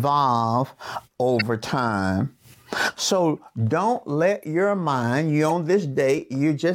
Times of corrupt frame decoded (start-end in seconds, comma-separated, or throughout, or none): 1.39-1.42, 3.37, 4.42, 5.49-5.52